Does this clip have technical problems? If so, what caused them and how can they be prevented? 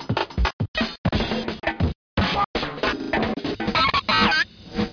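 No, there's nothing technically wrong to hear in this recording of sounds, so there's no cause to track down and nothing you need to prevent.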